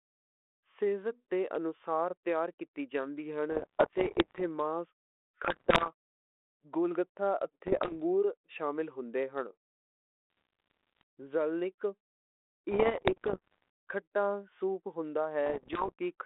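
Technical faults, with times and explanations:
3.52–4.42 s, 5.44–5.91 s, 7.66–7.95 s, 10.30–11.02 s, 12.71–13.70 s and 15.46–15.92 s, bit errors on an ADPCM link: bits in the compressed speech stream are corrupted, at around one in a hundred and worse near 5.44–5.91 s. Each flipped bit also throws off the decoder's step size and prediction, so the damage rings on briefly. This is heard as pops and rough, gritty bursts with short jumps in level over the narrow telephone-band speech.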